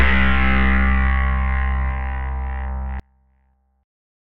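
An everyday sound recording whose level collapses abruptly at 3.00 s and stays down to the end at 4.30 s. The drop is about 32 dB, leaving only a faint residue of the sound. The likely cause is one channel inverted: with one stereo side in reversed polarity, everything common to both channels cancels when they are summed to mono, and only the small difference between them survives for that final stretch.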